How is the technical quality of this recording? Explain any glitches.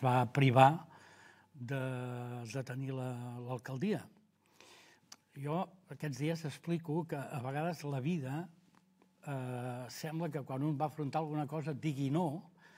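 Listening through the recording, nothing stood out as a technical glitch or problem worth pointing to.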